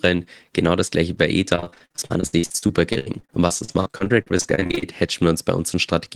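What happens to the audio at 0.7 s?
Nothing goes wrong at 0.7 s; the speech carries on intact through that moment, with no dropout, click or distortion.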